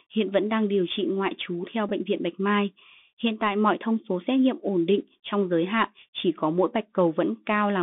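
A speech recording. Bluetooth CVSD headset codec, throughout: the one-bit delta coding, which fits a 64 kbps link, confines the sound to roughly 200 Hz to 3.6 kHz, with scratchy sibilants and granular hiss. Bluetooth headset packet repeated, at 1.89 s: about 15 ms of lost audio was filled by replaying the previous packet's bits, heard as a brief buzzy tick consistent with four repeated 3.75 ms packets.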